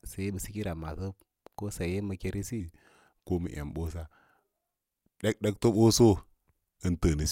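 A playback or editing stage most likely ran this speech recording against the wrong clock from 2.60 s to the end, giving a section at the wrong speed at 0.893 times normal. The first part sounds natural, then at that point the voice abruptly drops about two semitones and slows. Because speed and pitch shift together, the speech sounds deeper and more drawn out, with a sluggish cadence through the rest of the clip.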